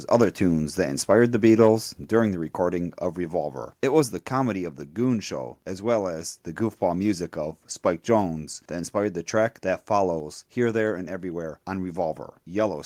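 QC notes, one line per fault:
2.04 s, microphone volume stepped down: the speech and the background behind it both drop by about 4 dB in one sudden step, right before "during the recording of", and stay at that lower level. Because the whole signal shifts at once, it's a change in gain before the recording rather than anything in the room. The likely cause is the call software deciding the mic input was running hot and cutting the device's input volume.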